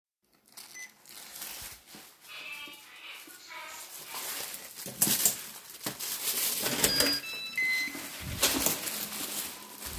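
No technical faults can be heard anywhere in the recording; the signal stays steady and intact throughout.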